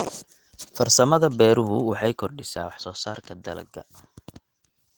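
From start to finish it's Opus voice compression, probably around 16 kbps in hybrid mode: full bandwidth is kept, but the speech is plainly hoarse and slightly robotic.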